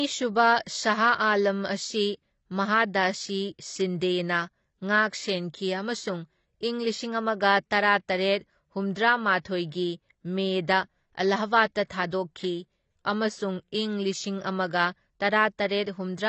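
Speech, likely squeezed through low-bitrate AAC compression, roughly 24 kbps: nothing survives above 8.1 kHz, leaving it dull, smeared and plainly artefacted. Pre-echo spreads quantisation noise ahead of sharp attacks, putting brief hiss before onsets at 0.63–0.66 s, 8.94 s and 12.10–12.12 s.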